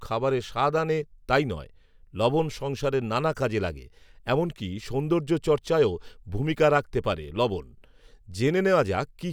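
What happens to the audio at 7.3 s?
Nothing goes wrong at 7.3 s: the speech carries on intact through that moment, with no dropout, click or other fault to be heard.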